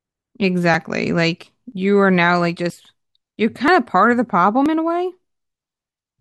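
Audio missing between chunks occurs at 0.74, 1.72, 2.70, 3.68 and 4.66 s, each a brief skip in the speech where roughly 20 ms vanishes and the sound on either side is butted together with no silence. The steady spacing, just under a second, points to audio likely being handled in 1-second chunks, with a short piece lost each time one chunk closes and the next opens.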